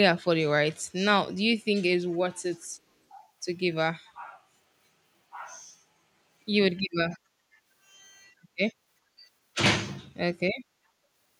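At 2.12 s and again at 4.06 s, a brief, very faint echo leak appears: a scrap of the speech returns about 422 ms late, likely because a far-end echo canceller let its loudspeaker pickup through. The same fixed delay and a discrete copy, not a smooth decaying tail, set it apart from room reverberation.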